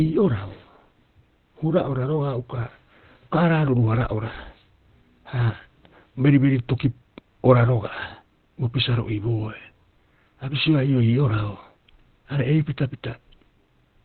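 From start to end the speech is muffled and hoarse, with nothing above 4.3 kHz. This is likely Opus compression in its narrowband speech mode at a very low bitrate, around 12 kbps. The codec damage is heavy.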